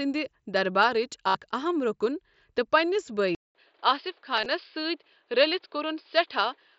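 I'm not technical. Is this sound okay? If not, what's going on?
No. At 1.28 s, about 70 ms of speech goes missing between the headset and the phone, and the gap is covered by repeating the last bit of sound. That's concealed Bluetooth headset packet loss, heard as a short buzzy held tone rather than silence. At 4.37 to 4.46 s the same thing happens in small scattered bits, so it is nearly hidden instead.

From 3.35 s the sound goes quiet for about 0.2 s, then comes back duller, with nothing above about 5.1 kHz and a new background hiss, though just as loud. That pattern likely means the input switched to a poorer device. Unlike the packet loss, this change lasts to the end of the clip.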